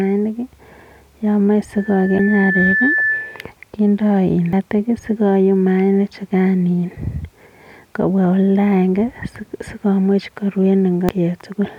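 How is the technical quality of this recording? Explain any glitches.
The recording has two kinds of fault: a feedback squeal early on and three brief decoding glitches from damaged compressed data.

Loudspeaker feedback squeal, 1.76 to 3.51 s: the microphone picks up the loudspeaker it feeds, and at 1.8 kHz the loop gain exceeds one. That tone swells over about a second into a steady squeal roughly as loud as the speech, then stops.

Damaged data in a compressed stream, at 2.16 to 2.20 s, 4.53 s and 11.09 s: corrupted bytes make the decoder misread frames and hunt for the next valid header. Each is heard as a short chirp or blip, the first one during the squeal.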